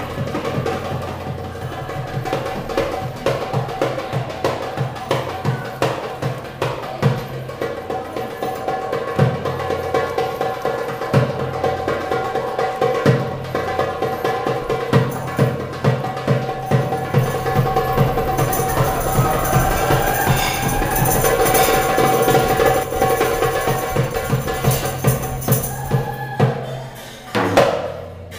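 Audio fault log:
22.83–22.96 s, sudden gain jump: the level drops abruptly by about 5 dB, and the background noise falls with the sound at the same instant, so the change reads as a step in the whole signal rather than a change in the source. The cause is likely a digital gain setting or bit shift applied between one sample and the next with no ramp, leaving a hard edge where a smooth fade should be.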